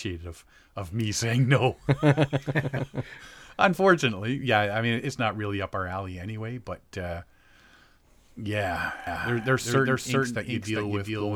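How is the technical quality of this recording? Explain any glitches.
One fault stands out in this speech recording. From 9.07 s to the end, a doubled audio track sets in abruptly. Every sound is followed by an identical copy at about the same level, roughly 400 ms later, dry and full-band with no room colour. The likely cause is a second, slower capture path or an edit holding two copies out of step.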